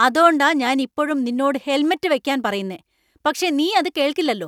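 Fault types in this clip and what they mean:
No faults detected on this speech recording.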